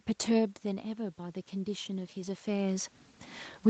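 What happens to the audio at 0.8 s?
At 0.8 s the audio is partway through an automatic gain rise that runs from 0.35 to 3.0 s. The input level falls by about 10 dB, apparently as the talker draws back from the microphone, and the gain control answers by slowly lifting its gain by about 6 dB. Unlike a talker simply moving closer, the room noise swells along with the voice, rising gradually over more than two seconds rather than jumping at once.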